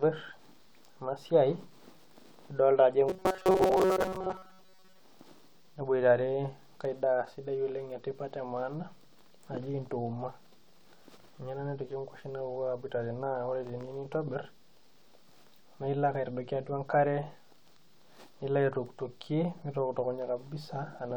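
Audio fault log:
3.09–5.00 s, robotic sound from repeated short buffers: new audio was likely reaching playback too slowly, so the software kept replaying a tiny slice of roughly 5.3 ms while most of the real signal, around seventy percent, was skipped. Replaying at that rate imposes a fixed buzz near 188 Hz on the speech, turning the voice into a rigid, metallic drone that only loosely tracks the original syllables for the length of the stretch.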